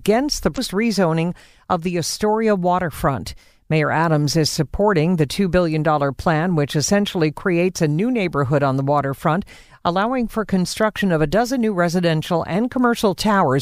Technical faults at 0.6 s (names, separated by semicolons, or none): damaged data in a compressed stream